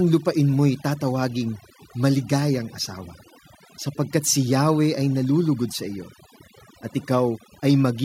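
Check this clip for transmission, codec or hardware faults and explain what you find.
One fault stands out, and it is a processing problem rather than a transmission one. Overdone noise removal runs throughout the speech: a noise reducer pushed too hard mutes individual frequency bands that sit near its noise estimate, taking soft parts of the voice too, so the background drops and breaks up into twinkling specks.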